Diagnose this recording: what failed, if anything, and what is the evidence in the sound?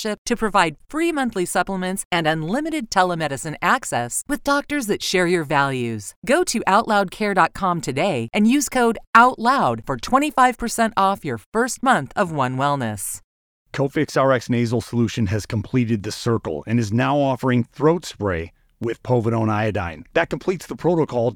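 Periodic USB or driver dropouts run from 16.84 s to 20.83 s, beginning just after "completed the circle and". The failure sits at the driver or buffer stage. About three brief ticks fall exactly 2.0 s apart, each a gap of roughly a millisecond where the audio drops to silence. That strict regularity points to a background task stalling the USB bus or audio driver on a fixed schedule, so each stall costs a tiny slice of samples.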